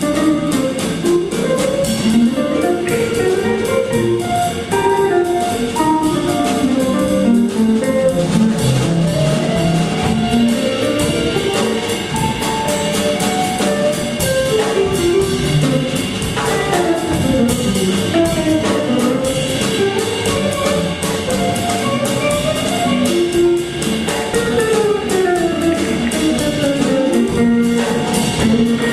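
No technical faults can be heard anywhere in the recording. Nothing in the audio calls for a timestamp or a repair.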